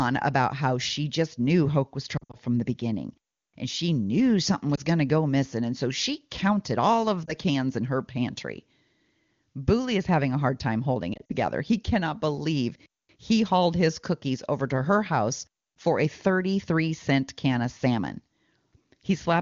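Lost AMR speech frames occur at 2.17–2.37 s, 4.76–4.80 s, 7.26–7.33 s and 11.13–11.32 s. Radio errors corrupted frames, so the decoder repeated the last good pitch and vocal tract parameters at decaying gain. The single-frame gaps give brief dips. The first and last are scattered clusters, with runs up to 60 ms and 40 ms, heard as dropouts that fall to near silence within two frames before the wideband speech returns weak or rough for a moment.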